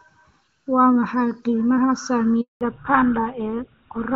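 Throughout the clip, the sound is hollow and phasey. This is channel delay causing comb filtering. One channel arrives a fraction of a millisecond late, and the two are summed to mono. Shared content cancels at evenly spaced frequencies, with the first notch around 700 Hz.

At 2.41 s, right after "maxay qiimaha", a handover gap begins. The call switched networks and no frames arrived. The speech fades within a few tens of milliseconds, then stays silent for 200 ms, until 2.61 s. Whatever was said there is lost.

From 2.61 s to the end, there is a fallback to narrowband. The wideband HD Voice sound before this point was clear, which fits AMR-WB at a high rate. Now nothing above 4 kHz remains. The speech turns duller and rougher, which points to a GSM full-rate codec.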